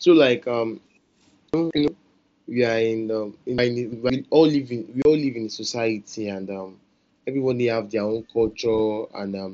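At 1.54 to 1.88 s and again at 3.58 to 4.10 s, chunks out of order jumble the sound. A 171 ms block plays late, one slot and then two. At 5.02 s, before "all live in", unconcealed Bluetooth headset packet loss leaves a 30 ms hole with abrupt edges, which fits four lost frames.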